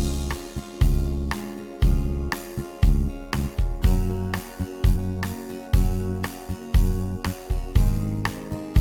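Frames were windowed and overlap-added with a window that does not sum to constant gain, so the level swings by about 6 dB around 100 times a second throughout, producing a metallic buzz with extra tones around each note. From 4.95 to 4.97 s, damaged data in the compressed stream makes the decoder lose sync and hunt for the next frame, leaving a brief disturbance.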